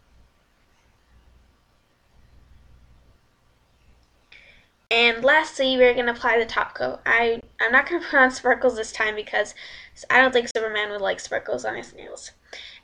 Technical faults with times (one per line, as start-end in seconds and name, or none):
4.87-4.91 Bluetooth dropout
7.41-7.43 Bluetooth dropout
10.51-10.55 Bluetooth dropout